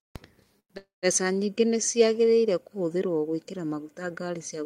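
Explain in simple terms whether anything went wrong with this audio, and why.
Twice the speech stalls, with a call audio freeze from 0.59 to 0.72 s and from 0.78 to 1.05 s. The last sound trails off into silence. Then the speech carries on where it stopped, with nothing lost. Delayed network packets are the likely cause.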